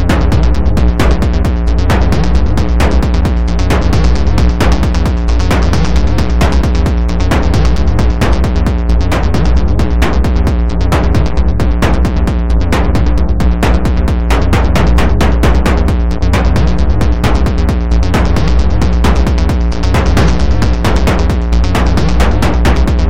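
Nothing here to flag: no technical faults turn up anywhere along the way.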